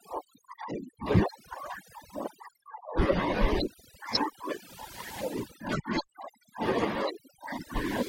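Overdone noise removal runs throughout this speech clip. A noise reduction stage set far too aggressively is pulling individual frequency bands down or shutting them off whenever they sit close to its noise estimate, and the quieter components of the voice are swept away along with the noise. The result is a background that drops and breaks up, dotted with twinkling specks.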